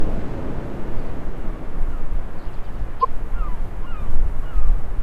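At 2.99 s, a short burst of garbled sound cuts in and lasts until 3.05 s, under a tenth of a second. This is damaged data in the compressed stream. Some bytes in that stretch are wrong. The decoder misreads those frames and loses its place. It then hunts for the next valid frame header before normal playback resumes. The result is a brief chirp or blip that does not belong to the surrounding sound.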